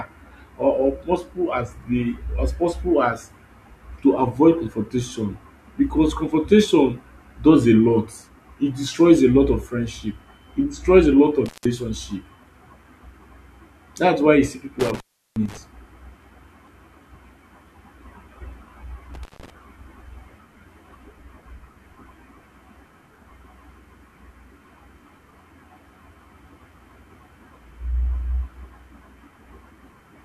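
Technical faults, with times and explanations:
11.46–11.65 s, 14.80–15.57 s, 19.14–19.50 s, intermittent contact: a loose cable or plug briefly opens, after "e destroys a lot" and "why you see", cutting the speech for about 168, 358 and 154 ms, with crackle at each edge and faint hiss in the gap.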